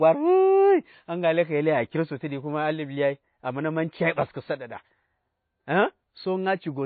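From the first moment to the end, the speech shows MP3 compression damage. It is plainly audible. Nothing is heard above 4.5 kHz, so the treble is gone and the sound is dull. Weak high parts flicker on and off between frames. That gives a watery, swirly texture, and s sounds turn metallic. The likely cause is an encoder starved of bits, which fits a bitrate near 24 kbps.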